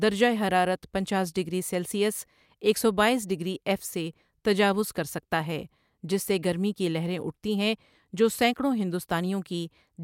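A short speech recording with no technical fault to report. No event in it needs a time stamp or a cause.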